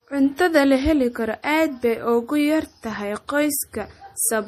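Throughout this speech clip the sound is watery and swirly with smeared edges and the treble cut off, likely from MP3 compression at a low bitrate, around 40 kbps.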